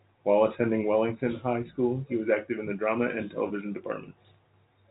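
At 3.48 to 3.50 s, packet loss with pitch repetition fills a 20 ms gap, which fits two lost packets. The repeated pitch period gives a brief buzzy hold rather than a silent dropout, heard through the G.711 telephone coding's 4 kHz band limit.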